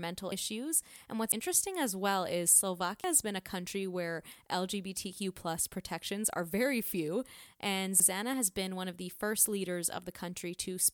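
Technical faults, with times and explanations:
0.32, 1.32, 3.04 and 8.0 s: dropped buffer (overrun). The sound skips ahead with no silence, losing about 70 to 100 ms each time, just before "as well is", "has been a country" and "has been one of". The likely cause is the program failing to collect samples before the hardware overwrote them, so the two sides are spliced directly.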